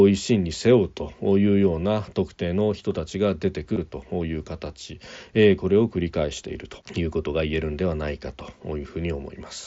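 A speech recording with one brief buzzy smear at about 3.75 s, lasting roughly 15 ms, where the waveform is patched with a repeat of the sound just before it and then warbles slightly as real audio resumes. This is concealed Bluetooth headset packet loss: a short run of voice packets between headset and phone went missing, and the receiver filled the gap with a repeated stretch of the sound it had already received. The audio is carried through the wideband mSBC headset codec, band-limited to about 8 kHz with light graininess on louder sounds.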